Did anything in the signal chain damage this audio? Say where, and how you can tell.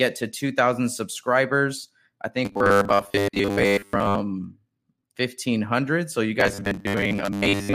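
Yes. Robotic sound from repeated short buffers appears from 2.45 to 4.20 s and again from 6.40 s to the end at 7.74 s. In both stretches the speech turns into a rigid, metallic buzz at 100 Hz that only loosely follows the original. A 10 ms block is being replayed, which likely points to the driver or buffer stage. When fresh samples arrived too late, repeats filled the gap and replaced most of the real audio there.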